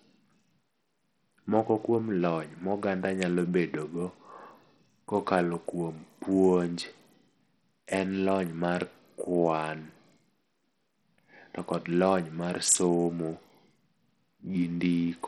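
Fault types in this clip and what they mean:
Bluetooth SBC compression: speech runs throughout with flickering, missing treble and gritty noise, likely from a starved SBC bit pool near 64 kbps; spectrograms show patchy high bands.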